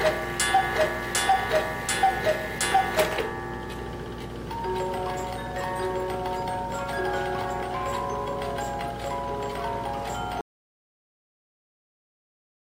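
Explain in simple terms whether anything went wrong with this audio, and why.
At 10.41 s the sound cuts off abruptly into an audio dropout to silence lasting to the end, likely from a lost input. Unlike a quiet pause, even the background room tone vanishes.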